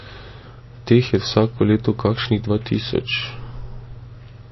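From start to finish the speech carries plainly audible damage, likely from MP3 compression at a low bitrate, which fits a rate near 26 kbps. With so few bits, the encoder discards all treble above 5.8 kHz and switches weak frequency lines on and off between frames, so the sound turns watery and swirly, s sounds lose their edge, and attacks smear. A spectrogram shows a flat ceiling at 5.8 kHz and patchy, flickering blocks below it.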